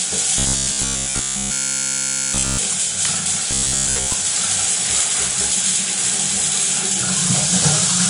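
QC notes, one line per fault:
Throughout: Vorbis compression. What treble remains sounds hissy and grainy. Tones are roughened and attacks are blurred. The damage is plainly audible. It likely comes from low-quality Vorbis coding, around 35 kbps. At that rate the coder lowers its cut-off and quantises the high band so coarsely that fine detail turns into noise of similar energy.
0.38 to 2.59 s and 3.51 to 4.14 s: robotic sound from repeated short buffers. Both stretches take on a rigid, metallic buzz at 66.8 Hz. The sound underneath still comes through only roughly. In the first stretch all of the audio is replaced by repeats. In the second, most of it is. This is likely a playback buffer running dry. The last snippet of about 15 ms is repeated while real audio is skipped, and that fixed repeat rate is heard as the buzz.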